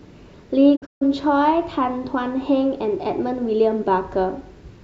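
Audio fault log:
0.75 to 1.03 s, digital broadcast dropout: the speech fades out over about 20 ms into short silent holes totalling 0.19 s, the longest 0.14 s. The receiver muted whenever frames were lost or corrupt, so that stretch of speech is simply gone.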